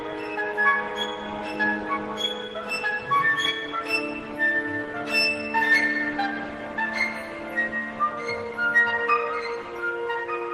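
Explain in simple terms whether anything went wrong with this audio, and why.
Nothing went wrong with this audio, because no faults can be heard anywhere in it.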